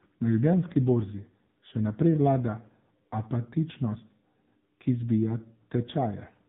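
Speech heard throughout through the AMR narrowband mobile codec: nothing passes above 4 kHz, and the voice is heavily buzzy and synthetic, which fits a low AMR-NB mode of about 6.7 kbps. Unlike a simple low-pass filter, the vocal-tract model and sparse pulse excitation reshape the voice itself.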